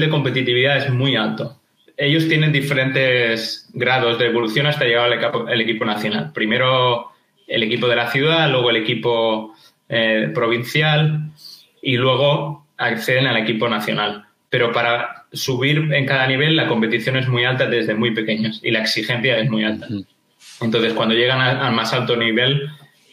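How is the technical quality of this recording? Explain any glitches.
No glitches can be heard anywhere in the recording, and the signal stays technically intact for its entire duration.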